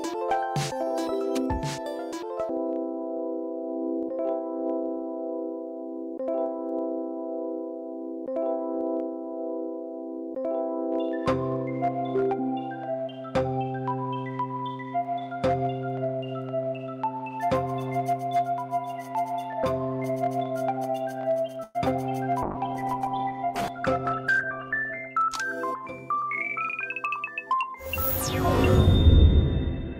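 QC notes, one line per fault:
21.63–21.77 s, call audio freeze: the sound stalls for about 0.13 s, the last fragment stretched into a brief fading buzz with roughly 20 ms of near-silence, then resumes exactly where it stopped with nothing lost. Likely delayed packets emptied the jitter buffer, inserting a 114 ms gap.
22.43–25.16 s, call bitrate drop: for about 2.7 s the audio turns coarse and watery, with the top end dulled and muffled. The encoder was pushed from 96 kbps down to 14 kbps, so detail is quantised roughly and high frequencies are discarded until the rate recovers.
23.68–24.99 s, jitter buffer speed-up: within the low-bitrate stretch the audio runs slightly hurried, about 8% fast, yet the pitch stays put. The receiver trimmed short pitch-period slices repeatedly, around a tenth of a second in total, to drain excess buffered delay.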